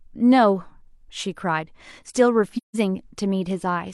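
Speech with an AAC frame loss with muting from 2.57 to 2.76 s. About 170 ms, consistent with four lost frames, decoded as silence and faded in and out by overlapping windows, so there's a soft-edged hole. The spectrogram shows a blank vertical band with tapered edges, and the waveform shows a fade to flatline.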